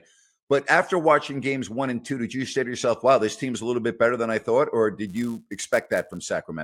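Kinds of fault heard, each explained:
Filter restarted on every block: a processing filter discards its internal state at each block boundary and starts again from silence, so every block opens with a small transient. From 5.07 to 6.18 s this shows as a buzz at 172 Hz, a steady train of ticks whose loudness tracks the level of the speech. That repetition rate fits a 256-sample block at a 44.1 kHz sample rate.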